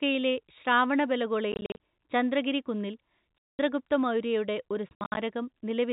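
Packet loss filled with silence hits at 1.52–1.77 s, 3.38–3.59 s and 4.89–5.17 s. Missing chunks became dead silence, so the speech gets chopped, with hard edges and gaps in steps that fit 10 ms packets. The middle dropout is one solid 210 ms hole; the other two are scattered.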